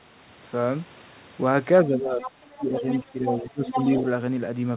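From 1.84 to 2.87 s the talker's speech dips by roughly 25 dB, for about a second in total. This is speech suppressed in double talk. The echo canceller likely could not tell the talker from the loudspeaker echo, so it turned both down. During this stretch the other side's voice leaks through, at 2.22 to 2.31 s and again at 2.56 to 3.11 s. It sits about 10 dB below the talker. The echo canceller likely left part of the loudspeaker signal in the microphone. A second suppression runs from 3.04 to 3.77 s. Here the speech sinks by roughly 15 dB, over about half a second in total. Further leakage follows at 3.32 to 3.44 s, about 10 dB down. It comes back at 3.65 to 4.02 s, now only about 5 dB below the talker. Throughout, nothing is heard above 4 kHz, which fits a G.711 A-law call path at 64 kbps.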